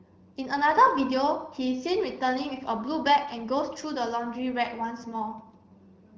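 Nothing stood out on listening to this speech, carried over the AMR wideband (HD Voice) codec at 15.85 kbit/s.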